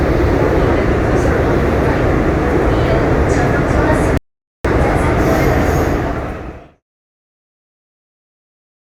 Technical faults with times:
4.17-4.65 rebuffering stall

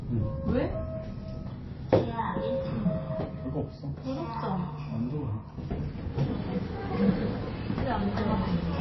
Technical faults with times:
0.00-8.81 MP3 compression

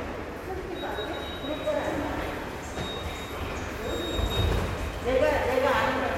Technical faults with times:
none

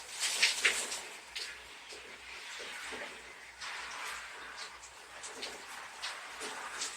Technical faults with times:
none

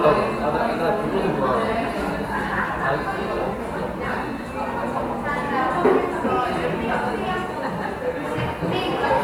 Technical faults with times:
none

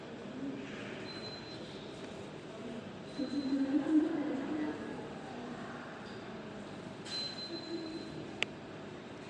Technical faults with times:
0.00-9.29 Bluetooth LC3 compression

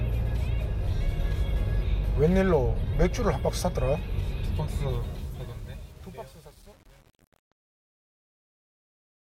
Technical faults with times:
4.89-9.28 truncation distortion on a fade

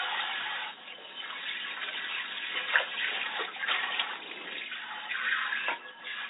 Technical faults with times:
none

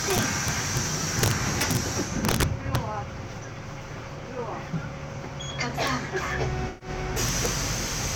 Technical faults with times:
0.10-0.77 integer overflow
1.19-1.77 integer overflow
2.25-2.76 integer overflow
5.87 integer overflow
6.68-6.89 AAC frame loss with concealment
7.29-7.46 integer overflow

